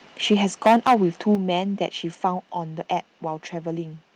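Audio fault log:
0.31–0.34 s and 0.66–0.95 s, microphone overload: the loudest speech peaks are flattened, with roughly a sixth of samples clipped, giving a harsh crackle. The likely cause is input gain set too high, driving the converter about 2 dB past full scale in the first burst and about 9 dB past it in the longer second one.
0.34 s and 1.35 s, microphone volume stepped down: speech and background both drop abruptly, by about 2 dB right after the first distorted peak and by about 7 dB after the second. This sounds like a sudden level cut, likely from the call software lowering the microphone's input gain once it detected clipping.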